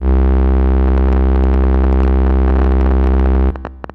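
A recording of everyday sounds carries a train of clicks from 0.88 s to 3.91 s: about forty similar pops at an uneven 12.9 per second, peaking roughly 5 dB above the sound. This is likely interference or a faulty connection or power supply. Each click appears as a thin vertical stripe on a spectrogram and a sharp spike in the waveform.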